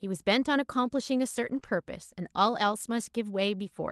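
From 1.47 to 1.57 s the sound turns briefly rough and noisy without breaking off. This is a lost packet rebuilt from error correction: the gap fits roughly three lost Opus packets, and about 60 ms were replaced by the low-bitrate copies carried in later packets.

Between 1.59 and 1.76 s there is a short smear and wobble. This is a short concealed packet loss. About 20 ms never arrived in time, the decoder extended the preceding sound to cover roughly 11 ms, and the stretch came out about 10 ms longer.

Overlapping that, from 1.62 to 1.69 s, the texture goes coarse again. It is another lost packet rebuilt from error correction, with about 40 ms, likely three packets' worth, decoded from the redundant copies. All of this passes through the Opus call path at 32 kbps with a 12 kHz bandwidth.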